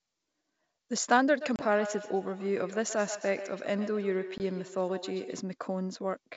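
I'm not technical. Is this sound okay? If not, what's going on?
No, there are two problems. From 1.35 to 5.47 s there's feedback echo between two devices: two devices in the same room are on the call, so one picks up what the other plays, and the sound comes back about every 150 ms, thinner and ringing.

There's also packet loss on an ADPCM call, at 1.56 s and again at 4.38 s. A few small chunks of the call went missing, 30 ms and then 20 ms, leaving a sharp-edged gap. The decoder briefly loses track, so the sound comes back with a click or a moment of roughness before settling.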